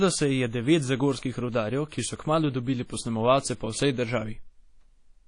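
Speech that sounds washy and ringing throughout, with a hiss that swells and fades with the talker and nothing at all above 10.1 kHz, so the top end is dull and sibilants lose their edge. This is plainly audible WMA compression, the likely cause being a transform codec run at a low bitrate. The damage points to something around 32 kbps, where weak spectral detail is discarded and quantisation noise smears across each long block. From 1.89 to 1.92 s a brief hiss runs ahead of a sharp onset, which then lands softened and blurred. This is pre-echo, spreading about 29 ms before the attack. Because the attack falls late within a coding block, noise sized for that loud moment is spread evenly across the whole block, including the quiet stretch just before it.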